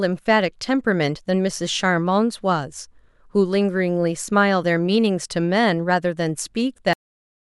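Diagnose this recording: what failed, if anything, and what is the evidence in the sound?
The failure is a cut-off end at the storage or buffer stage: the final buffers of speech were never written, so the recording stops in the middle of a sound at 6.93 s and sits in digital silence for the remaining 0.61 s. This differs from a natural ending or a fade-out: the speech has no decay and no tail-off in level, and the silence that follows is digital silence rather than room tone.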